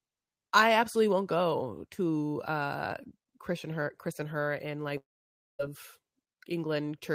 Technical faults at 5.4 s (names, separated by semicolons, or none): long network dropout